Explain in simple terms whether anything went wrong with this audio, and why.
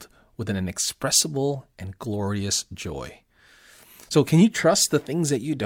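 Listening to the recording, nothing stood out as having gone wrong with the sound at any point.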